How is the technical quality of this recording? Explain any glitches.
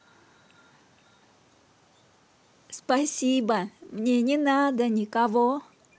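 The recording has faint echo leak at 0.35–0.63 s, 1.06–1.17 s and 5.60–5.64 s: scraps of the voice repeat about 480 ms late, far quieter than the speech, likely from a loudspeaker echo canceller letting residue through. A fixed, distinct delay sets this apart from room reverb.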